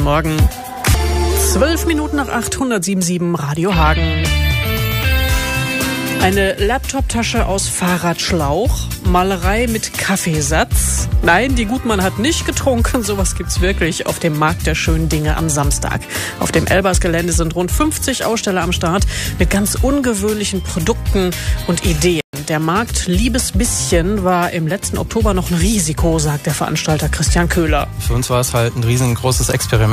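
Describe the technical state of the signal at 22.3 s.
A playback stall runs from 22.21 to 22.33 s: the sound cuts off abruptly in mid-flow and the output falls silent for about 127 ms before resuming. The likely cause is the player briefly starving for data or its output thread being blocked.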